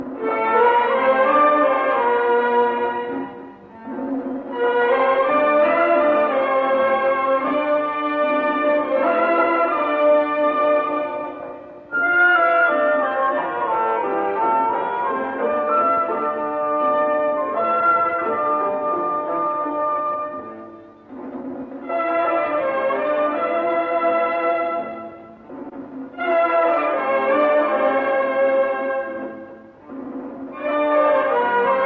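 No technical faults are audible anywhere in the recording.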